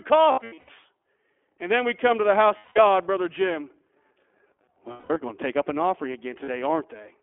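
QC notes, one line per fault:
Throughout: iLBC codec. The audio is confined to roughly 250 Hz to 3.4 kHz, with nothing above. Frame-by-frame excitation coding leaves plainly audible roughness and a synthetic edge, consistent with the 15.2 kbps mode and 20 ms frames.
0.32–0.71 s, 2.58–2.79 s, 4.92–5.17 s, 6.44–6.50 s: lost iLBC frames. At each gap the decoder repeats the last pitch cycle mixed with noise, so the audio becomes a held, buzzy vowel before recovering almost at once. About 280 ms is lost, scattered over 360 ms, in runs of no more than roughly 70 ms. The other gaps are 180 ms, about 200 ms, and 40 ms.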